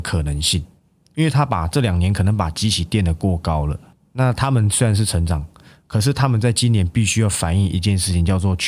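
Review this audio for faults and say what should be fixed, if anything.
No faults turn up anywhere in the recording. Nothing here needs to be fixed.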